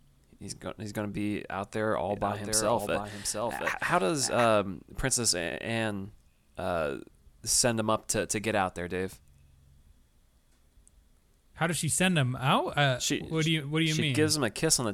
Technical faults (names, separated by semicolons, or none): doubled audio track